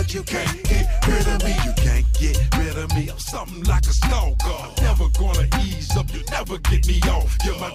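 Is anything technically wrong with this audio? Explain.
No, the signal holds steady throughout, with no audible technical faults anywhere in the clip.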